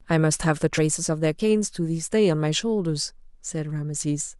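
Damaged data in a compressed stream strikes at about 0.77 s, a blip of roughly 16 ms in the speech. At that point the encoded frames carry corrupted bytes, so the decoder either misreads them or throws them away, loses its place in the stream and hunts for the next valid frame header before decoding resumes. The result is a brief glitch in the speech.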